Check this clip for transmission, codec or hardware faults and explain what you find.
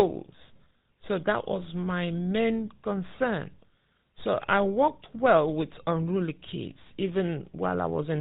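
Two faults are present: coding through the GSM full-rate codec throughout, and a single lost GSM frame early on.

GSM full-rate codec, whole clip: the speech was squeezed through a vocal-tract model excited by regularly spaced pulses, consistent with the 13 kbps full-rate mode. Nothing above 4 kHz survives, and the speech carries a plainly audible buzzy, gravelly roughness.

Lost GSM frames, 1.52 to 1.59 s: the decoder lost a single frame, about 20 ms, and filled the gap by repeating the last good frame's settings. The speech briefly holds on a rough, metallic ring before continuing.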